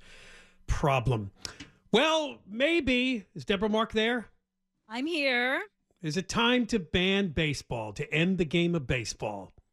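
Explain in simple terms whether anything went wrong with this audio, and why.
Nothing went wrong here.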